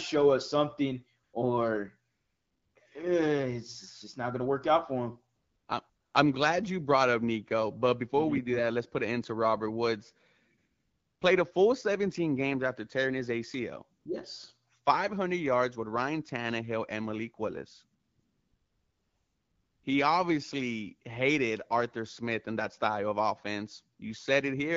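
AMR comfort noise appears seven times. The phone's voice detector judged the talker silent, stopped sending speech frames, and the receiver filled each gap with synthetic noise built from a rough level and spectrum estimate. The gaps fall at 1.23–1.33 s after "us something", 2.11–2.75 s, 5.35–5.67 s after "work out for him", 5.89–6.13 s before "I'm glad you brought", 10.57–11.21 s, 13.99–14.05 s and 17.99–19.83 s. In each one the real background is swapped for a smooth, steady hiss that switches abruptly in and out.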